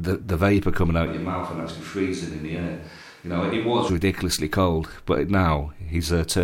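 A speech recording where the close microphone's feed was likely lost from 1.07 to 3.89 s, forcing a switch to a distant microphone. The voice abruptly turns roomy, hollow and bass-light, drops roughly 5 dB, carries room noise about 35 dB down, then snaps back.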